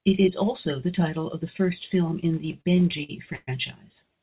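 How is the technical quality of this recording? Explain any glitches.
One glitch stands out, in speech that arrives band-limited with nothing above 4 kHz, which points to a narrowband call codec such as G.711. From 2.52 to 3.49 s there are repeated stalls (stutter). Packets reached the receiver late, so its jitter buffer ran dry ten times. Each time it stretched the last sound to fill the wait, about 274 ms in all and up to 120 ms at once. Nothing drops out, but the speech drags and stutters.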